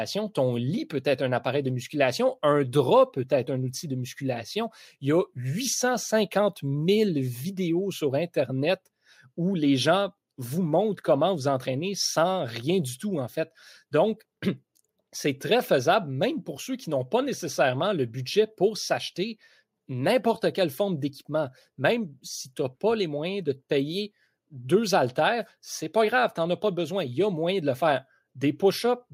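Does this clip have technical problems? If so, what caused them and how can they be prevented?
No, no technical problems can be heard here.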